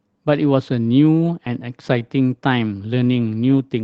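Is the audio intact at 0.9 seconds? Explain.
Yes, at 0.9 s the speech is intact, with nothing breaking up the sound beyond the ordinary character of the call path it travelled through.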